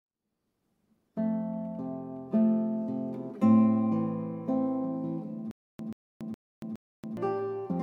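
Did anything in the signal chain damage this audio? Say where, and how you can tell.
Yes. From 5.51 to 7.17 s one 134 ms burst repeats four times between 281 ms silences, a stutter with silent gaps, likely a stalled playback buffer.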